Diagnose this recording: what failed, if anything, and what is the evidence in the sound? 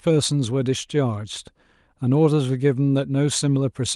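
Nothing failed at any stage of this speech recording.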